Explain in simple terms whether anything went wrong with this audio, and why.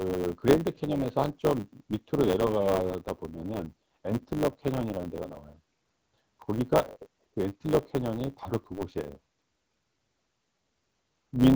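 Block size mismatch (truncated), throughout the clip: one stage hands over longer chunks of audio than the next stage takes, and the leftover end of each chunk is dropped. That causes a steady 100 Hz buzz and makes the speech run about 1.07 times fast while the character of the voice stays the same, which fits 512-sample blocks.

AMR rate drop, from 2.31 to 5.57 s: the phone codec switched to a lower-quality setting, probably because of a weak radio link. The speech turns rougher and more synthetic-sounding but keeps going without gaps, and it clears once the rate recovers at 5.57 s.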